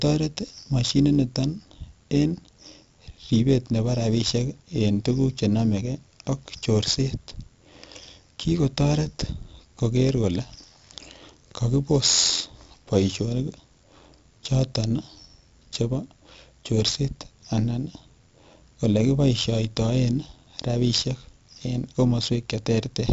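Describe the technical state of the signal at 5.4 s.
At 5.4 s, as throughout the speech, frames were windowed and overlap-added with a gain that doesn't sum flat, so level swings by about 6 dB at roughly 100 cycles a second. That produces a metallic buzz with extra tones around each voiced sound.

The audio also passed through 4-bit ADPCM compression, storing each sample as a coarse adaptive step from a prediction. The damage is heavy: a gritty hiss tracking loudness, smeared attacks, and nothing above 7.7 kHz, which fits a 64 kbps stream at a low sample rate.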